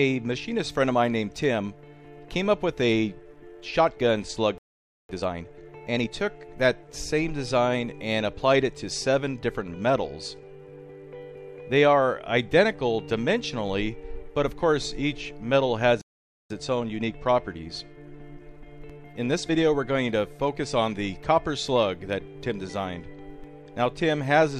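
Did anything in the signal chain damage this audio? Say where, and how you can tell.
Yes. At playback, a playback stall, likely from the player running dry or being blocked, cuts the sound to silence at 4.58–5.09 s and 16.02–16.50 s, each about half a second.

Time-compressed catch-up follows each stall as the player trims its backlog with cross-faded cuts. The sound hurries at unchanged pitch, at 1.5× over 5.09–6.11 s and 1.1× over 16.50–19.50 s.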